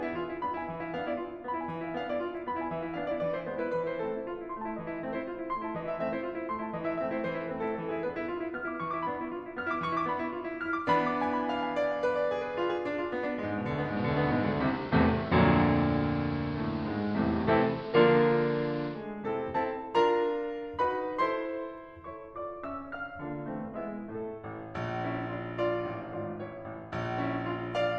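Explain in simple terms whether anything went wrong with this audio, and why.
Between 13.80 and 19.06 s the radio lost its digital signal, a digital radio blending to analogue, switching to the station's AM broadcast. Over a 200 ms cross-fade the music turns dull, loudness shifts, and a hiss appears.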